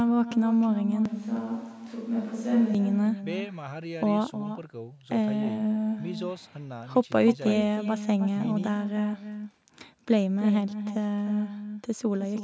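From the start and throughout, an echo with no canceller is present: the far end's loudspeaker is picked up by its microphone and returned unremoved, so every phrase is followed roughly a third of a second later by a thinner, quieter copy about 9 dB down.

Between 1.05 and 2.75 s the sound abruptly turns hollow and distant, with less bass, a few decibels lower in level and with faint room noise underneath, then snaps back. This is likely a switch to a distant microphone after the close one dropped out. The call's normal band limit at 8 kHz is heard throughout.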